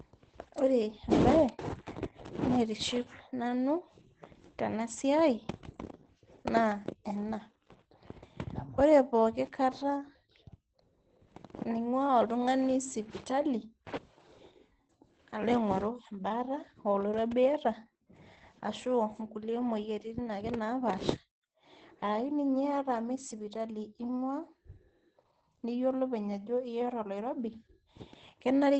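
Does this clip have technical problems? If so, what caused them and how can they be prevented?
Yes. Throughout the speech there is Opus voice compression, and its damage is plainly audible. Nothing is heard above about 8.6 kHz, which points to wideband SILK coding at a low bitrate, around 12 kbps, in 20 ms frames. The linear-prediction coder keeps the broad spectral shape but codes the excitation coarsely, so the voice comes out muffled, hoarse and slightly robotic. To prevent it, encode at a higher Opus bitrate so the coder can keep full bandwidth and finer excitation detail.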